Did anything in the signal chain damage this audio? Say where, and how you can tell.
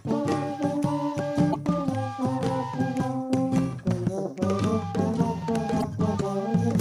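Yes. There are two brief blips where the sound breaks up, one from 1.50 to 1.56 s and another from 5.79 to 5.85 s, each lasting about 55 to 60 ms. The fault is damaged data in a compressed stream, at the codec stage. Corrupted bytes there made the decoder misread those frames and lose sync, producing garbage output until it found the next valid frame header and resumed clean decoding.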